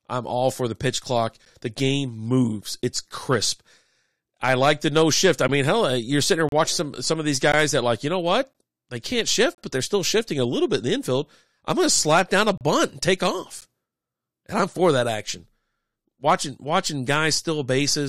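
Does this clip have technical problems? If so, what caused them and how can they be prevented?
Yes. Gaps between stream segments leave hard-edged silences of 10 to 34 ms at 1.45, 5.48, 6.49–6.52, 7.52, 8.53, 9.55–9.58, 12.58–12.61 and 13.61 s. They fall on 1 s segment boundaries. Mismatched time stamps leave holes there, and the player fills them with silence. Prevent this by making each segment's time stamps continue exactly from the previous segment's end.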